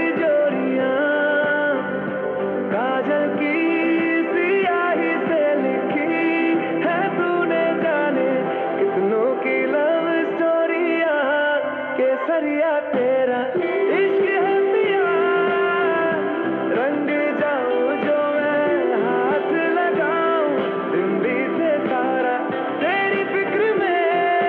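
No technical faults can be heard anywhere in this audio. The sound stays continuous and steady throughout, with nothing at any moment to single out.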